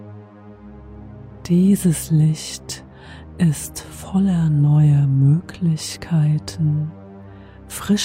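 No technical faults can be heard anywhere in the audio, and the signal holds steady throughout.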